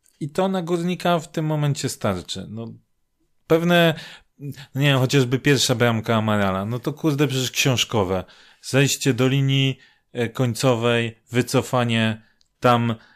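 Nothing stood out as a technical fault on listening to this speech recording.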